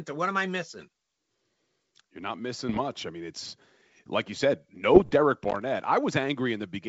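Speech over a G.722 wideband telephone path, reaching up to about 7 kHz, has two bursts of bit errors on an ADPCM link: 2.69 to 2.80 s, just before "I mean it's like", and 4.94 to 5.12 s, just after "it's like you said". Each flipped bit throws the decoder's step size and predictor off, so the damage rings on as rough pops and brief level jumps. On a spectrogram these appear as short broadband vertical smears, and the waveform shows jagged spikes and sudden amplitude steps, which fits error rates of around 0.7 and 1 percent. From 5.43 to 5.62 s there is loose connector crackle: a worn or dirty contact repeatedly making and breaking, chopping the signal into an irregular scratching burst. It shows as a dense cluster of thin broadband clicks on the spectrogram and as a waveform broken by dropouts and sharp discontinuities.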